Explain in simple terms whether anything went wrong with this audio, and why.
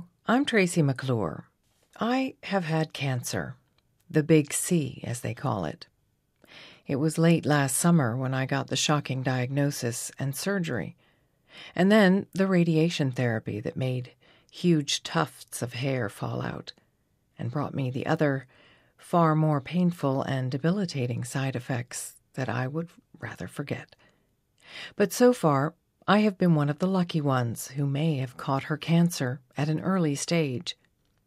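Nothing went wrong with this audio that a listener can pick up on. There are no dropouts, glitches or sudden changes anywhere in it.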